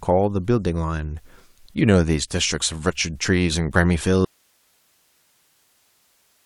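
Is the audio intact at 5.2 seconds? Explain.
No. An audio dropout to a faint residue runs from 4.25 s to the end: the speech cuts off abruptly, leaving only hiss roughly 40 dB down. It is likely a signal break with the path still live, not a fade or digital silence.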